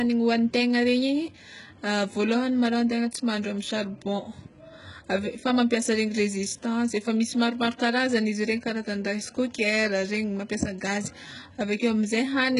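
Speech, carrying heavy HE-AAC compression damage from start to finish. Sibilants sound gritty and lispy, and the upper register has a metallic sheen. The likely cause is spectral band replication: the treble is rebuilt from copied lower bands rather than coded, which fits a very low bitrate of around 12 kbps. On a spectrogram the upper band shows repeated, smeared blocks of lower-frequency texture that do not line up with the true harmonics, and nothing appears above 11.1 kHz.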